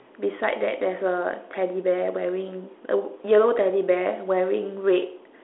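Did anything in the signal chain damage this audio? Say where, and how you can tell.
No, nothing in the signal chain damaged this audio.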